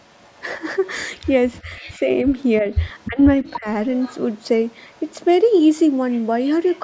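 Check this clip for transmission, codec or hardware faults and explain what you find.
The clip has two kinds of fault, both tied to echo control on a speakerphone call: leaking echo and speech ducked during double talk. The audio carries nothing above 8 kHz, which is normal for call microphone processing.

Echo leak: A faint, delayed repeat of the speech trails behind it from 0.00 to 1.98 s, again from 2.99 to 5.14 s, and once more from 6.11 to 6.79 s. The copy lags by about 310 ms in the first stretch and 300 ms later on. It sits roughly 25 dB, 20 dB and 30 dB below the speech respectively, so it is most noticeable in the middle stretch. The likely cause is a far end playing the call through a loudspeaker, where the echo canceller failed to strip everything its microphone picked up and sent the remainder back.

Speech suppressed in double talk: The speech dips briefly between 1.65 and 2.08 s, losing about 5 dB for a very short time. 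It is pushed down harder between 2.62 and 3.67 s, by around 15 dB across roughly a third of a second in pieces. This is likely the echo canceller meeting both sides talking at once. Unable to tell the local talker from loudspeaker echo, it turned both down together.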